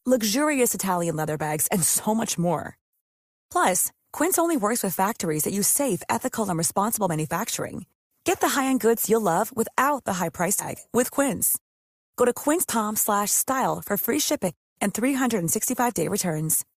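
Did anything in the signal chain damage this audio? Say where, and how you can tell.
Yes. The speech jumps forward three times, at 10.59 to 10.65 s, 12.69 to 12.72 s and 14.47 to 14.50 s. These are compressed frames skipped at the codec stage. Whole 20 ms frames never reach the output, so the sound leaps ahead by a few frames (about 70 ms), then roughly ten (about 200 ms), then around five (about 100 ms).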